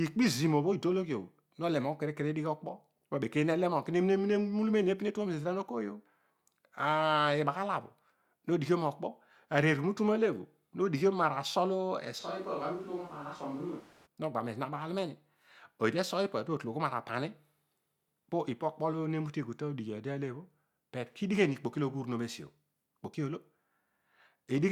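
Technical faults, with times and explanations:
12.21–14.05 s, switch to a distant microphone: the speech abruptly turns roomy and hollow, thinner in the bass and about 5 dB quieter, with room noise rising to roughly 25 dB below the speech. The close microphone likely dropped out, leaving a farther pickup until the sudden return.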